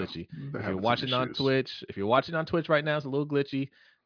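No technical faults can be heard anywhere in the speech recording.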